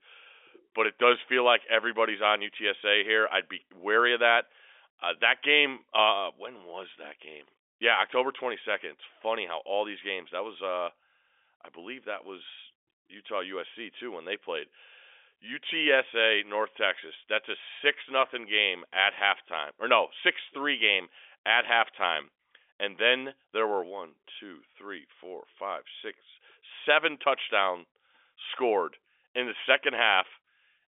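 No technical faults can be heard anywhere in this speech. The sound carries the narrow band of a G.711 telephone line, roughly 300 Hz to 3.5 kHz with nothing above about 3.7 kHz, and any coding noise from that path stays faint at most.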